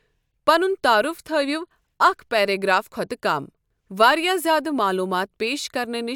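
No technical faults can be heard anywhere in the recording.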